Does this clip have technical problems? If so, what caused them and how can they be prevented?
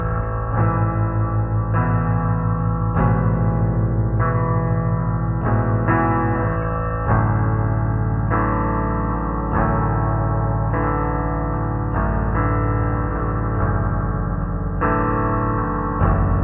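Yes. A wrong sample rate affects the whole clip: everything runs at half speed and sits a full octave (12 semitones) lower, which fits audio recorded at 16 kHz being played back at 8 kHz without conversion. Speed and pitch drop together by the same factor, which tells it apart from time-stretching (slower but same pitch) or pitch-shifting (lower but same tempo). To prevent it, resample to the playback device's rate or tag the file with its true rate.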